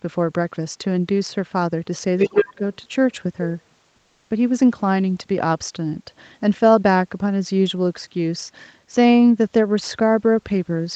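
From 2.18 to 2.47 s, the other side's voice leaks through: a second voice, roughly as loud as the talker, sits under the speech. Unlike crosstalk, it behaves like loudspeaker echo, likely left behind by an echo canceller that did not fully remove it.

Overlapping that, from 2.29 to 2.61 s, the talker's speech is suppressed in double talk. For roughly a third of a second it dips by as much as about 20 dB. This is not a dropout, because the dips track the moments when both voices overlap, likely from the canceller turning everything down while both sides speak.

From 3.96 to 4.30 s, comfort noise replaces the background for 340 ms. The real room sound gives way to a steady, featureless hiss about 6 dB quieter, then returns when sound resumes. A plain gate would leave silence, but here the gap is filled with noise. That points to discontinuous transmission, likely Opus DTX, on a call path whose audio stops at 8 kHz.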